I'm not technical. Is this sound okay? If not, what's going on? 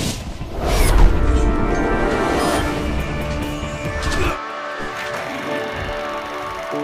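Yes, this one's fine: there's nothing wrong with it that you'd need to worry about, so no technical problems to explain.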